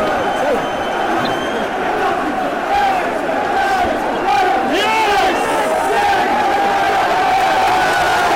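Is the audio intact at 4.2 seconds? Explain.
No. At about 4.16 s a corrupt frame was decoded: flipped bits in a couple of compressed frames reached the decoder, which played them anyway, so misread gains and codes put energy at wrong frequencies, heard as a brief chirp or blip of noise.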